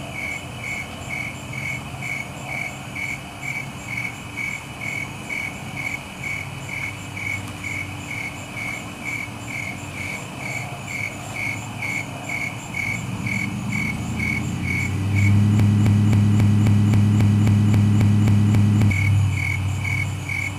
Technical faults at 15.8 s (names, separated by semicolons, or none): broken-record loop